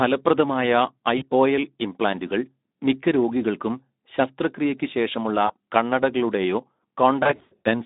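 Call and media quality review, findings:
Hoarse, grainy speech throughout, thin narrowband line with nothing above about 3.7 kHz or below about 200 Hz. Component: Speex codec. Mechanism: CELP coding with too few excitation bits, consistent with roughly 11 kbps, so damage is plainly audible.

Brief stretched smear fading out, 1.17 to 1.23 s. Component: jitter buffer and decoder, VoIP packet loss concealed by the speech codec. Mechanism: about 40 ms missing, which fits two lost 20 ms frames. Decoder extrapolated the last pitch and filter at falling gain.

Short stretched blip, 5.47 to 5.53 s. Same mechanism. About 20 ms gap, which fits a single lost frame, smoothed over by extrapolation.

Repeated stretched, fading sounds with weak, distorted sound between them, 7.23 to 7.68 s. Same mechanism. About 280 ms lost across a 420 ms span, longest run 100 ms. Concealment state carries over, so recovery lags between losses.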